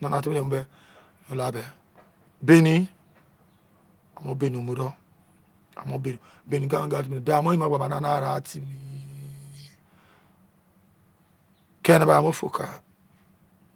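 No technical faults are audible.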